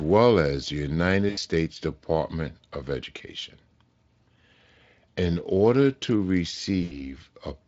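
At 1.29 to 1.39 s and 6.83 to 7.19 s, VoIP packet loss concealed by the speech codec occurs. Each gap fits about 80 ms of lost packets. The decoder extends the last sound into a buzzy tone or coloured noise that fades, and the speech stays weak briefly afterward.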